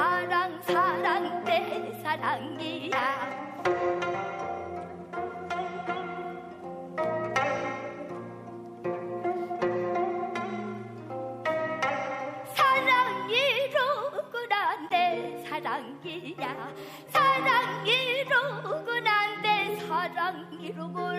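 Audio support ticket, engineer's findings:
Short chirp/blip at 14.89–14.92 s, peaking around -20 dBFS. Probable component: decoder. A single compressed frame with flipped bits played as-is, with misread codes and gains putting energy at the wrong frequencies for that frame's length.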